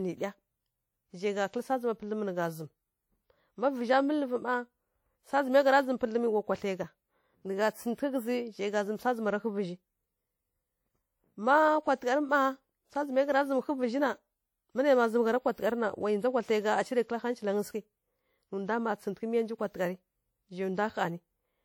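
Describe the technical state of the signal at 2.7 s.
At 2.7 s the speech carries the same ringing, washy smearing heard across the whole clip, plainly audible and most likely WMA compression at a rate that fits about 48 kbps. Long transform blocks spread quantisation noise over tens of milliseconds, so hiss breathes with the signal. Unlike a band-limiting fault, content still extends to about 20.1 kHz.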